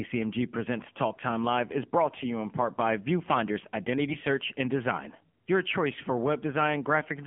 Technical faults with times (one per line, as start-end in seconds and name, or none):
0.00-7.26 AMR narrowband mobile codec
4.10-4.17 AMR bit errors